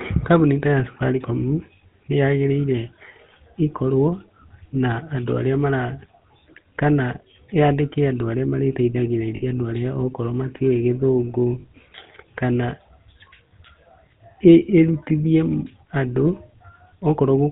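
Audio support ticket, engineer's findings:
GSM full-rate codec, whole clip: buzzy, gravelly roughness on all speech, plainly audible, with nothing above 4 kHz. This is pulse-driven vocal-tract modelling, consistent with 13 kbps full-rate GSM. It is rough rather than watery or swirly, unlike transform-codec artefacts.

Lost GSM frames at 9.36–9.43 s (60 ms, before "andũ arĩa okorwo") and at 11.60–11.65 s (40 ms): short metallic ring. The decoder repeats the last good frame, which fits three and two 20 ms frames. The sound is held and ringing, not a silent gap or click as in a plain dropout.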